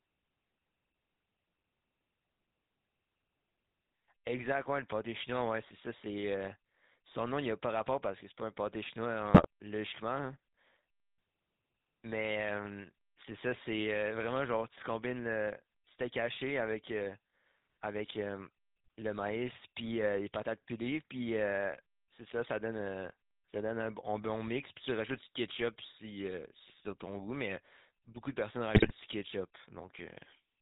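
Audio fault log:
Throughout: GSM full-rate codec. The speech has a buzzy, gravelly roughness, with plainly audible codec damage, and nothing above 4 kHz. The voice is rebuilt from a vocal-tract filter driven by sparse, regular pulses, which fits a 13 kbps GSM full-rate stream.
9.34–9.46 s and 28.74–28.93 s: GSM bit errors. The speech breaks into brief squawks and gargling. Corrupted filter, pitch and gain values reach the decoder, so each damaged frame gets a warped spectrum or a sudden jump in level. The second burst is longer.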